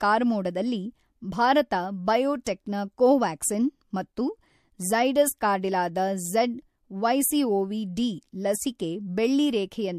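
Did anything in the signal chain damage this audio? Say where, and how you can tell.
Yes, in the codec stage: pre-echo at 2.44 to 2.46 s, just before "ನ ಕೊವ್ಯಾಕ್ಸಿನ್ ಮತ್ತು". A 21 ms hiss rises about 22 dB ahead of the attack, which is smeared. This points to a roughly 36 ms transform block that never switched to short blocks.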